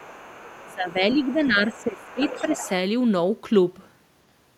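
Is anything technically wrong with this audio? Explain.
Yes. Other side's voice leaking through: a faint second voice sits under the speech from 0.00 to 0.74 s and from 1.11 to 1.46 s, then grows noticeably louder from 1.74 to 2.69 s. This is likely residual loudspeaker echo that the echo canceller failed to remove from the microphone signal.

Speech suppressed in double talk: the main talker dips by roughly 15 dB, dulling and partly dropping out, from 0.62 to 1.03 s and again from 1.33 to 2.65 s, overlapping the leaked voice. The likely cause is the echo canceller being unable to separate the two talkers during overlap and attenuating both.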